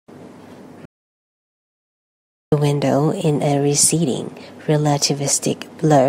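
At 0.85 s the speech cuts off into dead digital silence, with no room tone, until 2.52 s, when it resumes on "window in a receding". This audio dropout to silence erases about 1.7 s, likely from a lost input while recording continued writing zeros.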